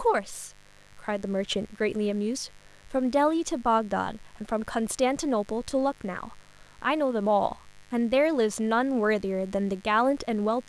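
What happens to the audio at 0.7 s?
At 0.7 s the speech sits over a mains buzz. It is not a momentary event. The buzz runs through the whole clip, so it is already present at that moment. It comes from a 50 Hz supply. Sharp switching spikes, twice per mains cycle, leak into the signal path through something like a dimmer, a rectifier or poor shielding. That yields a dense stack of 50 Hz harmonics reaching into the kilohertz range. It sounds like a steady, raspy buzz, roughly 30 dB below the speech.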